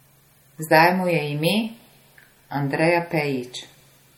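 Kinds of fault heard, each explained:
Low-bitrate audio saved at a high bitrate: the speech keeps artefacts from a likely earlier low-bitrate MP3 encoding, and the spectrogram shows nothing above 19.3 kHz throughout.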